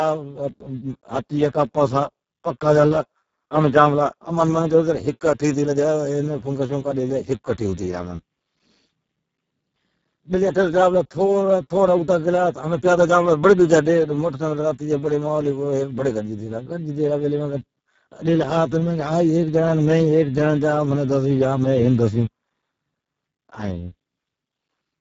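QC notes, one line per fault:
Throughout, Speex codec: hoarse, buzzy, near-robotic speech, the sound of a CELP coder starved of excitation bits at a rate pointing to about 6 kbps. Above 4 kHz there is only hissy fill, ending near 7.7 kHz, not the watery swirl of transform codecs.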